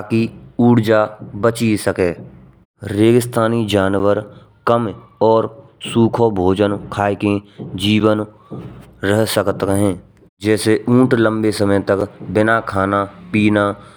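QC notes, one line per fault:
3.99 s, 8.00 s, 12.01 s: gap between chunks. The speech stops dead for about 6.5 ms at each point, about 4.0 s apart, leaving three hard-edged holes. The audio was delivered in 4-second pieces, so silence sits at every join. On the waveform, each gap shows as a flat near-silent line with abrupt edges. On the spectrogram, each one appears as a thin vertical blank stripe across all frequencies.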